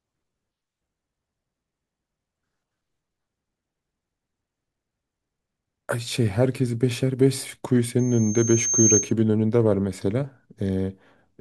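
Loudspeaker feedback squeal in this speech clip, from 7.99 to 9.13 s: a 6.4 kHz tone where the microphone hears its own loudspeaker, swelling over about a second to roughly 5 dB above the speech.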